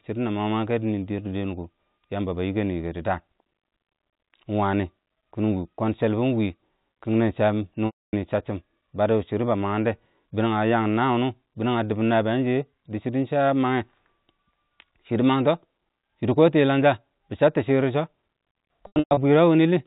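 Packet loss with pitch repetition breaks this telephone-band speech recording, carried over G.711 mu-law coding, at 7.86–8.13 s and again at 18.87–19.17 s. The receiver bridged each gap by repeating the last pitch period, which faded to silence across the solid 270 ms dropout. The second loss, 240 ms spread over 300 ms with its longest run at 120 ms, leaves a broken stretch of held buzz and brief returns of speech.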